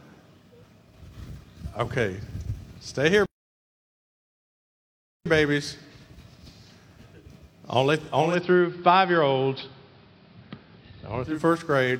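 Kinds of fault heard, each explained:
Playback stall: at 3.26 s the sound halts and stays silent for 2 s before resuming at 5.26 s, likely because the player was starved of data or blocked. Unlike a network dropout, it is one long, clean silence with no glitching around it.
Digital radio blending to analogue: from 8.16 s to 11.45 s the sound cross-fades over about 261 ms to an AM broadcast, gaining faint hiss at unchanged level. Unlike a plain filter fault, hiss arrives with the smooth blend.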